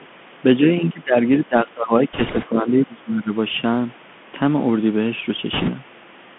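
A speech recording carried over a Bluetooth headset link using the CVSD codec, with the audio confined to roughly 150 Hz to 3.4 kHz, consistent with a 64 kbps CVSD stream. This one-bit delta coder can only step up or down by an adaptive amount each sample, so loud, bright sounds outrun it, and the codec damage is plainly audible: sibilants come out scratchy, peaks distort, and a granular hiss sits beneath the speech with no high end above the narrowband limit. In the first 0.07 s, the other side's voice leaking through, likely residual echo from a loudspeaker that the echo canceller failed to remove, appears as a faint scrap at about 35 dB below the talker. Later, the canceller likely mistook the talker for echo during double talk and pulled everything down, giving speech suppressed in double talk from 0.81 to 1.15 s and again from 1.37 to 3.32 s. The voice dips by up to around 20 dB over roughly a third of a second in the first span and about one and a half seconds in the second. 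On top of that, bit errors on the Bluetooth voice link flip bits in the CVSD stream at around 3 percent from 2.13 to 2.46 s and from 5.53 to 5.71 s. Because every bit carries equal small weight and the decoder recovers quickly, these produce no sharp clicks, but instead a rushing, crackly noise laid over the speech for those stretches.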